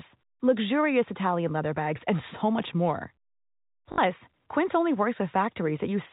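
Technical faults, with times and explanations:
3.92–3.98 s, packet loss with last packet repeated: about 60 ms of audio went missing, which fits three 20 ms packets, and the receiver just kept replaying the last good chunk until fresh data showed up. Since those repeats don't line up with the pitch of the speech, you get a quick robotic stutter with a buzz at roughly 50 Hz, the packet rate, riding over the telephone-band G.711 sound that tops out at 4 kHz.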